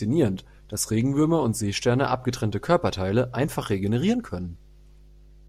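A steady low 50 Hz drone sits under the speech throughout, roughly 25 dB down: mains hum, the power line leaking in through a ground loop or nearby transformer.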